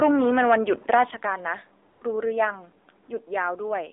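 Throughout, the speech sounds thin, buzzy and somewhat synthetic, confined to roughly 300 Hz to 3.7 kHz with nothing above. This is the AMR narrowband mobile codec. Each 20 ms frame rebuilds the voice from a vocal-tract model excited by a handful of pulses, and the clear coding damage fits a low mode of about 7.4 kbps. With so few bits, the buzz and artificial edge are plainly audible.

From 1.92 to 2.02 s, and again from 3.04 to 3.08 s, the real background drops out and a smooth, steady hiss switches in, then switches off abruptly. This is AMR comfort noise. The phone judged the talker silent and stopped sending speech frames, for 100 ms and then 40 ms. The receiver filled each gap with synthetic noise shaped from a coarse estimate of level and spectrum, which is why it sounds uniform rather than natural.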